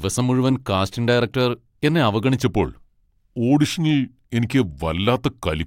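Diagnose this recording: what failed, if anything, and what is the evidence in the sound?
A section at the wrong speed, most likely from a playback or editing stage running this part against the wrong clock rate, so the samples come out slower than they were captured. From 2.43 s, right after "മുഴുവൻ കാസ്റ്റിംഗ് ഡയറക്ടർ എന്നെ", to the end of the clip, the speech plays at 0.893 times its proper rate. Because speed and pitch are tied together here, the voice drops by roughly two semitones and turns deeper and more drawn out.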